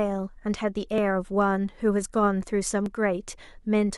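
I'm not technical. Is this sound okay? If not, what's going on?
No. There are two spots where the speech skips, at about 0.98 seconds and 2.86 seconds. At each one, the sound jumps forward slightly. The first skip is very brief, a few thousandths of a second. The second is longer, around a hundredth of a second. The likely cause is a dropped buffer (overrun). The recording software fell behind, a small chunk of sound was overwritten, and the pieces on either side got stitched together.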